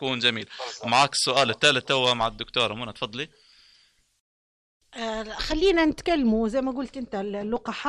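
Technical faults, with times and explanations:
0.0–5.52 s, pre-emphasis left on: the treble stays boosted with no matching cut, about 11 dB at 10 kHz, fitting a J.17 curve. Speech sounds thin, bright and hissy.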